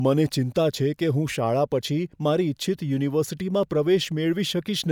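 No technical faults are audible.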